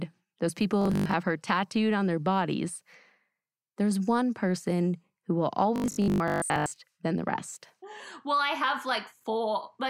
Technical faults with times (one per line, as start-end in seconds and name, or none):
0.81-1.13 robotic sound from repeated short buffers
5.76-6.84 robotic sound from repeated short buffers